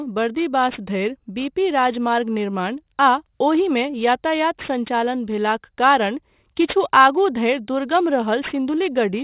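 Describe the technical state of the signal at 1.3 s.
Aliasing is present at 1.3 s, as it is throughout the clip. The audio was brought down to a lower sample rate without an anti-aliasing filter, so content above the new limit folded back around 4 kHz, which fits a rate of 8 kHz. Those mirrored components land at unrelated pitches, roughly 20 dB below the speech, giving sibilants a gritty, metallic edge and leaving the spectrum packed right up to the band limit.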